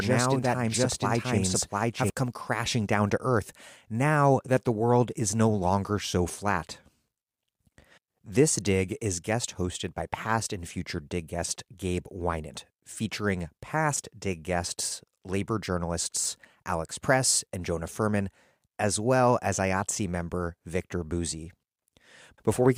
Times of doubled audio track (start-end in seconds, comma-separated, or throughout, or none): 0.00-2.10